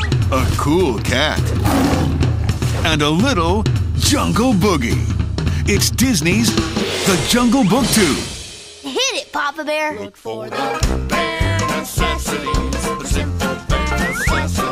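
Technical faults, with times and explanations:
No technical faults detected.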